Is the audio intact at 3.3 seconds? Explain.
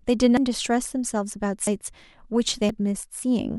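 Yes, the audio is intact at 3.3 seconds, with no fault audible at that moment.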